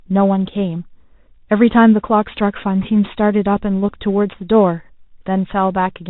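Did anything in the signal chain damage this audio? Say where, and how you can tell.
Yes. The damage sits at the codec stage for the whole clip: this is the Bluetooth CVSD headset codec. A spectrogram shows a hard ceiling at 4 kHz, with a granular hiss floor under the speech. The s sounds turn scratchy, and loud high passages distort where the one-bit delta steps can't keep up.

A second fault sits on the wireless link, where a Bluetooth headset packet was repeated at 3.9 s. About 11 ms of audio, which fits three lost packets, was replaced by the last packet decoded again. This produces a brief buzz near 267 Hz, seen on the waveform as a short, identically repeating pattern.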